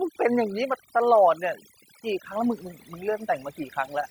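Overdone noise removal runs throughout: bands near the noise estimate are cut hard, leaving near-silent, twinkling gaps, even after room noise rises by about 20 dB around 2 s. Speech is cut by the noise suppressor at 0.48–0.70 s (about 7 dB), 1.35–1.61 s (about 11 dB) and 2.56–3.94 s (about 12 dB, affecting roughly 0.7 s), leaving quiet parts swallowed and faint.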